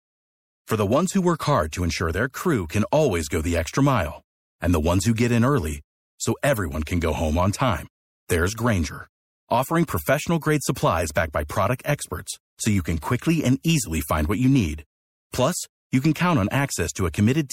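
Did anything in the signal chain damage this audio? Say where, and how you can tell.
Yes. The damage sits at the codec stage and runs through the whole speech clip. The sound is plainly degraded: s sounds turn watery and metallic, and consonant attacks smear. The likely cause is MP3 compression, at a bitrate that points to about 64 kbps. With so few bits, the encoder zeroes weak frequency lines. Those lines flicker on and off between frames, which gives the swirly texture.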